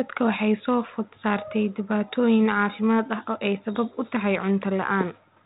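Nothing in this speech recording stood out as a technical fault on listening.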